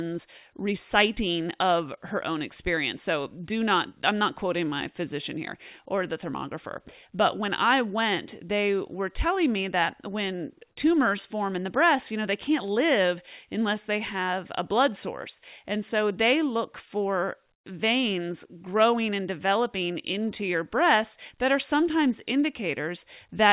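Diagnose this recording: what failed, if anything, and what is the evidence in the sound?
From 17.54 to 17.66 s the background drops about 22 dB into featureless hiss, likely comfort noise in place of the background from discontinuous transmission in call processing.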